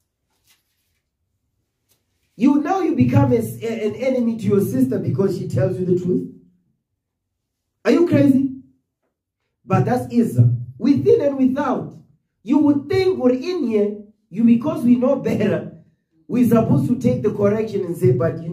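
From 11.6 s to the end, the resampler restarted on every block, treating each 50 ms chunk in isolation so its edges were converted against missing neighbours. Each boundary leaves a small error, heard as a steady 20 Hz ticking riding on the signal.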